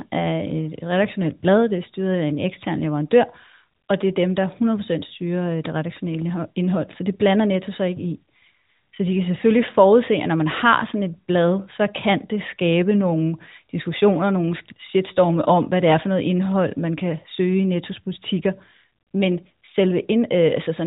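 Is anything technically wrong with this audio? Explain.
No, nothing here is actually wrong: it's a speech recording that comes across just like an ordinary narrowband mobile phone call.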